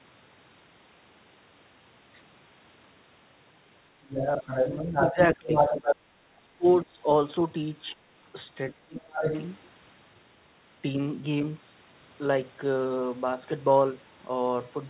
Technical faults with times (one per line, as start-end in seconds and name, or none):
3.98-5.96 other side's voice leaking through
5.12-5.53 speech suppressed in double talk
6.40-7.01 speech suppressed in double talk
8.75-9.24 speech suppressed in double talk
8.98-9.44 other side's voice leaking through